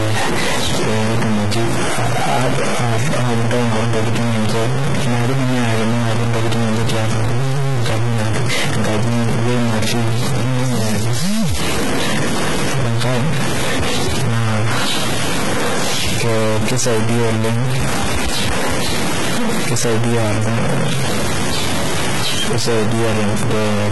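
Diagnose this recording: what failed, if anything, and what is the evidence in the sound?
A stuck bit, likely at the converter or on a data line feeding it, runs through the whole clip. One bit of each sample sits fixed at 0 or 1 while the rest of the word carries the speech, so roughly half the samples land off by that bit's weight in a pattern that follows the waveform. The speech comes through distorted, and the pauses fill with noise because the bit keeps flipping as small values cross zero.

HE-AAC compression, likely HE-AAC v2 at the codec stage, is also present from start to finish, and the damage is heavy, which fits a bitrate around 16 kbps. Only the low band is really coded. The treble is rebuilt by spectral band replication, copying lower bands upward under a coarse envelope, so its harmonics don't line up with the real ones. S sounds turn gritty and lispy, and there is nothing above 11.8 kHz.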